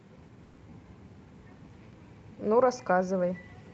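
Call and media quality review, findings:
Call audio freeze, 0.43–0.71 s: speech stalls into a fading buzz or hiss smear of the last sound for about 140 ms, then resumes exactly where it stopped, pushed later with nothing dropped. Likely late packets draining the jitter buffer. Top end tops out around 8 kHz.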